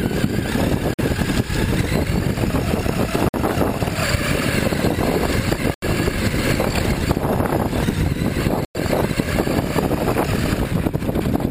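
The audio cuts to silence four times: 0.94 to 0.99 s (50 ms), 3.29 to 3.34 s (53 ms), 5.74 to 5.82 s (80 ms) and 8.65 to 8.75 s (100 ms). These gaps point to a likely Bluetooth stall, where interference delayed packets, the headphone buffer emptied and playback halted until resent data arrived. What separates this from a codec dropout is that each break is plain silence rather than a smeared, warbling or repeated fill, and the sound then carries on.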